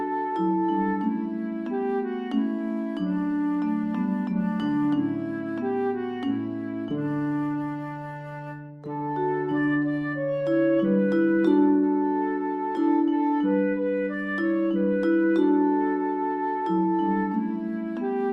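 No technical faults are audible anywhere in this recording.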